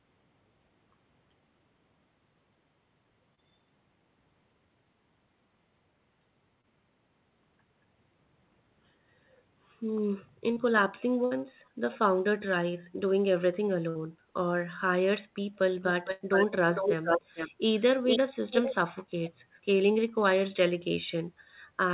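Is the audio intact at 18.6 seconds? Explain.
No. An echo leak runs from 18.51 to 18.74 s. A copy of the speech returns about 0.45 s late, only slightly quieter, likely from incomplete echo cancellation.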